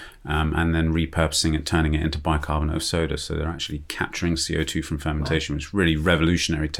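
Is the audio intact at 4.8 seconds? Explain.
Yes, at 4.8 seconds the speech plays through intact, with no dropout, click or distortion at that point.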